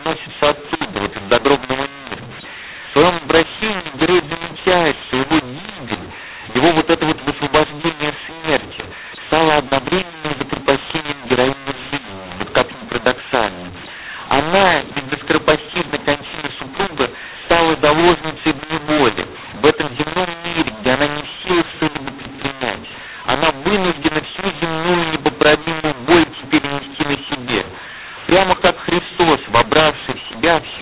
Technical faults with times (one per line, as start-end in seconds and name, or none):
0.00-30.82 mu-law and A-law mixed up